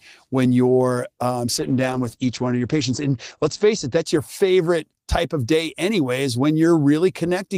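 A call bitrate drop hits this speech recording from 1.5 s, right after "when you're um", to 4.11 s, before "your favorite type of". The encoder's budget collapses, the coarse texture pointing to roughly 32 down to 12 kbps, so the audio turns rough and muffled, with everything above 8 kHz cut away.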